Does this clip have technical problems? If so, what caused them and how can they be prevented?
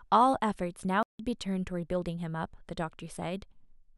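Yes. There is a playback stall from 1.03 to 1.19 s. The speech cuts to silence for about 164 ms, then resumes. The player likely ran out of buffered data or had its thread blocked. A larger playback buffer and higher thread priority prevent this.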